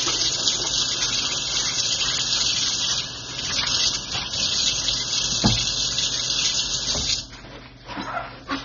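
Throughout, nothing is heard above 6.9 kHz, and the sound is dull and smeared with a warbling texture. This is likely AAC compression at a low bitrate, around 24 kbps.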